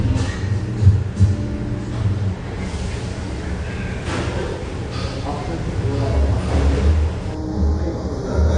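Low-bitrate audio saved at a high bitrate runs throughout: the MP3 carries nothing above 9.8 kHz, which fits a likely earlier low-bitrate encode, roughly a 32 kbit/s AAC pass, later re-saved at around 256 kbit/s. The larger file cannot restore the missing top end or the first-generation artefacts.

Channel delay (comb filtering) appears from 7.35 s to the end at 8.58 s. One channel lags the other by about 0.2 ms before the mono sum, so cancellations fall at evenly spaced frequencies starting around 3 kHz, giving a hollow, phasey colour.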